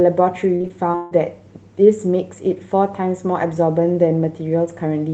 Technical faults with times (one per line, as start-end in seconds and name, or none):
0.55-1.13 repeated packet loss (robotic sound)